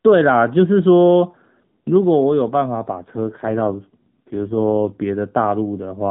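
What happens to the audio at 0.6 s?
Nothing goes wrong at 0.6 s: the speech carries on intact through that moment, with only the narrowband, telephone-like character of the AMR mobile codec that runs through the clip.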